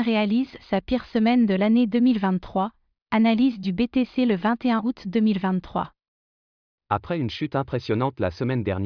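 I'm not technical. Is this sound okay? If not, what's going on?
Yes, nothing in this speech recording stands out as a technical problem. There's nothing here that needs fixing.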